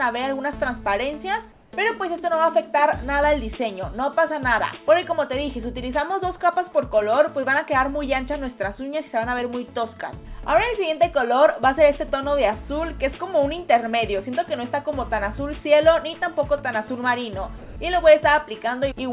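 From 1.52 to 1.72 s, the sender's voice detector likely judged the background, about 35 dB below the loudest passages, to be silence and paused transmission. The receiver filled that 0.2 s with comfort noise in place of the background: a steady, featureless hiss, about 1 dB different in level.

At 17.58 to 17.76 s, the sound dropped by the voice detector appears: the detector likely mistook real sound for background, so about 80 ms of it is lost. Smooth synthetic noise covers 0.18 s before the sound resumes, band-limited to 4 kHz like the rest of the call.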